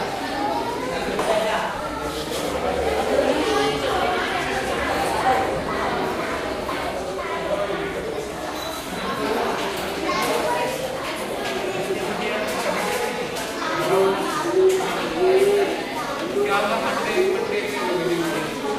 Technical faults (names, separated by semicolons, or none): doubled audio track